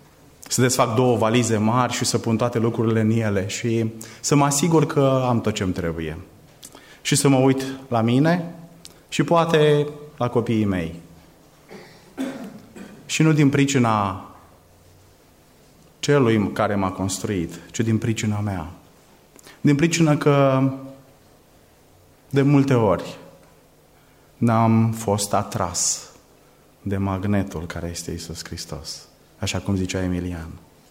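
No technical faults can be heard anywhere in the recording, so there is nothing to place in time.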